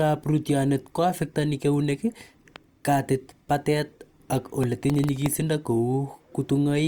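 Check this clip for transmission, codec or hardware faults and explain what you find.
Two faults are present in this speech clip: a loud pop and a burst of processor overload crackle.

Between 2.56 and 2.58 s, right after "rootyonet koaffektani keunek" and just before "katit patet ak", a single loud pop lands on top of the speech, which continues beneath it. It is likely caused by a sudden voltage step, such as a plug, switch or static discharge, entering the signal path, where the following circuitry shapes it into a brief pulse. On the waveform it is a lone spike standing a few decibels above the speech peaks. On a spectrogram it shows as a thin vertical line spanning the full frequency range.

From 4.64 to 5.26 s, some time after "katit patet ak", a stretch of processor overload crackle rides over the speech. Around ten audio buffers, each roughly 0.7 ms long, miss their processing deadlines. 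Each miss splices a fragment of stale audio back in with hard edges, and together these discontinuities are heard as gritty tearing that stops once the load eases. The waveform shows abrupt jumps scattered through that span. The spectrogram shows a cluster of broadband vertical streaks.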